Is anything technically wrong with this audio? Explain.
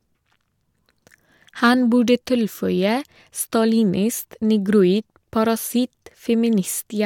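No, nothing technically wrong.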